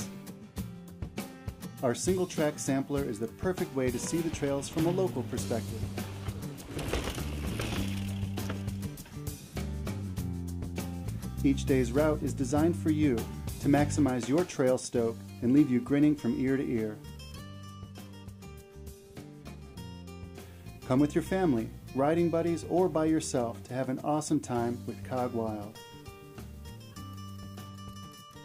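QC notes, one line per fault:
No technical faults were found in this signal.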